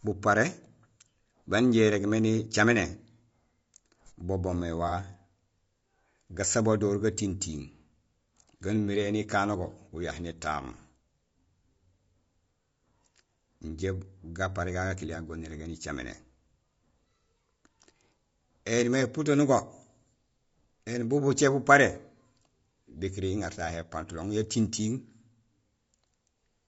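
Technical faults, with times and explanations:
Throughout, low-delay AAC compression: the speech has a plainly audible roughness and graininess, with noise filling the gaps between harmonics and a top band that sounds lowered or synthetic. That's most likely AAC-ELD, the low-delay flavour used on video calls, and the damage fits a low rate of around 32 kbps. At that rate the coder can't spend enough bits on each frame's spectral lines, so detail gets swapped for noise.
4.88–4.93 s, AAC frame loss with concealment: right after "bo boomé" there's a brief smeared, noisy patch lasting about 30 ms, which fits a single dropped frame. The decoder had nothing for that stretch, so it rebuilt it from the last good spectrum, guessing at phase or energy. That patch-up gets the rough shape right but not the fine structure, which is why it sounds smudged rather than silent.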